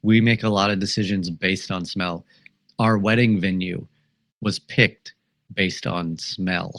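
No technical faults can be heard anywhere in the speech recording. There is no moment where the sound breaks from its normal course.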